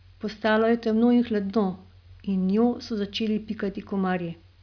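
A speech recording, with nothing technically wrong with it.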